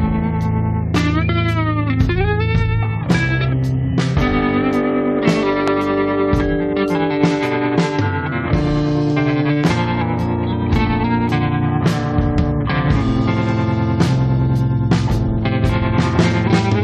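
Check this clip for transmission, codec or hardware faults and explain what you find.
Two hardware-type faults are present, both loud pops. Loud pop at 5.68–5.70 s and 9.64–9.66 s: a sudden voltage pulse, likely from a switch, static or driver glitch, adds single sharp thumps, roughly 15 dB and 10 dB above the signal, while the sound continues underneath.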